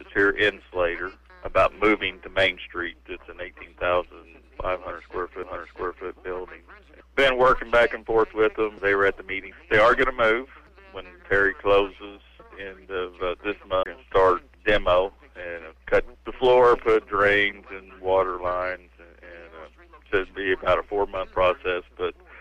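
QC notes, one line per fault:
5.43 s and 13.83–13.86 s, CD skip: two spots where the laser lost its track and landed on a different turn of the disc's spiral. The player mutes briefly, hardly at all at 5.43 s and for a few tens of milliseconds at 13.83 s. It then picks up from another point on the disc, so you hear a small tick followed by the sound abruptly carrying on from a different place, with a hard seam where the jump happened.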